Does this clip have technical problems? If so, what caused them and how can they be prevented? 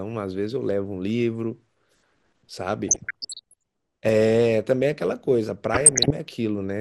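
Yes. Throughout, the speech sounds dull and granular with a gurgling edge, likely MP2 compression at a low rate, which fits around 80 kbps. Unlike burbling, it never lets up. A higher bitrate would prevent it.

DAB burbling appears from 2.89 to 3.62 s and from 5.73 to 6.11 s. Bit errors of roughly 0.7 and 1.0 percent corrupt the audio data, giving short blips of noise in single sub-bands rather than steady dullness. Better reception, for example a stronger signal or a better aerial, would prevent it.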